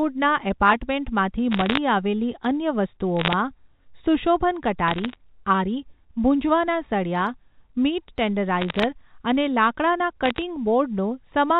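Bit errors on a digital phone line flip individual bits in the G.711 A-law stream, at a rate somewhat under one percent. Each flipped bit corrupts one sample, so sign and high-bit hits become sharp ticks. The result is bursts of crackle over otherwise intact speech in the 4 kHz telephone band at 1.52–1.78 s (just before "આવેલી અન્ય"), 3.17–3.33 s, 4.88–5.16 s (ahead of "આરી ભુંજવાના સળિયા મીટ"), 8.60–8.84 s, and 10.24–10.42 s (after "અને લાકડાના").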